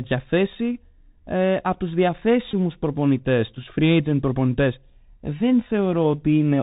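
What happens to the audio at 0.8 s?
At 0.8 s you're hearing the Bluetooth CVSD headset codec, which runs through the whole clip. It sends one up-or-down bit per sample with an adapting step, so the speech is cut off above 4 kHz, s sounds turn scratchy, and a grainy hiss sits underneath, all consistent with a 64 kbps CVSD link.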